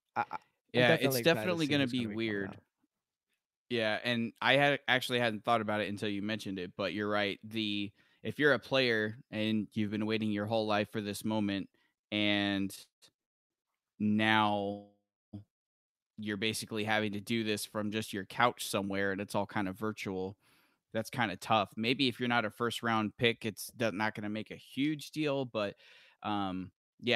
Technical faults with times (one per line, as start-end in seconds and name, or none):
12.75-14.66 repeated stalls (stutter)
13.22-13.52 call audio freeze
14.72-15.35 call audio freeze
18.16-20.23 jitter buffer speed-up
25.45-27.06 jitter buffer speed-up